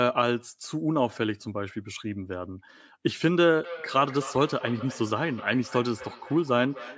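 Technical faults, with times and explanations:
3.64–6.97 s, feedback echo between two devices: the speech comes back at a steady interval of roughly 0.3 s and keeps circling to the end of the clip, the loudest repeat sitting about 15 dB below the direct speech and the repeats sounding thinner and more ringing than it. A second device in the room is playing the call aloud into this microphone, and the echo canceller cannot remove sound that its own device did not play. The call's microphone processing caps the audio at 8 kHz.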